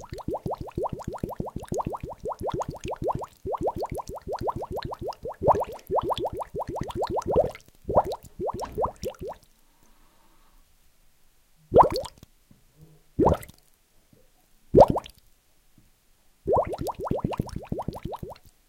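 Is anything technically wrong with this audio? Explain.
No, nothing technically wrong can be heard in this recording of sounds: the signal stays intact throughout, with no audible disturbance at any point.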